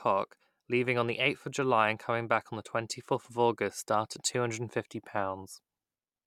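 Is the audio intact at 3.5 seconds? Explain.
Yes, the speech is intact at 3.5 seconds, with no audible fault at that moment.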